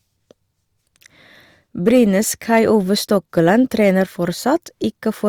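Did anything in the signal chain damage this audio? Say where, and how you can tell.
Yes. Hard clipping damages the speech at 1.87–2.03 s and again at 2.53–2.76 s, where the signal peaks were driven about 4 dB and about 3 dB past the limit of a converter or gain stage. The tops are sliced flat, and the sudden corners add harmonics high up the spectrum, heard as a gritty crackle only on those loud moments. Unlike soft saturation or codec smearing, the distortion switches on abruptly at the peaks and vanishes between them.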